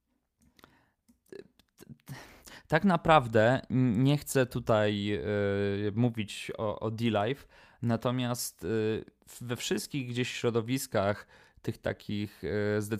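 No technical faults can be heard anywhere in this speech recording.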